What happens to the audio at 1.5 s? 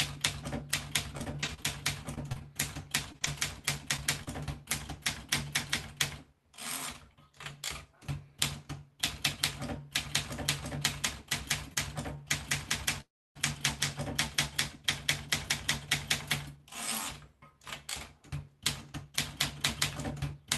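At 1.5 s you're inside a stretch of repeated packet loss (robotic sound) running from about 1.17 to 4.28 s. Packets keep going missing in short bursts, the longest about 34 ms, and each hole gets papered over by stretching the last bit of audio, so it turns choppy with pieces missing.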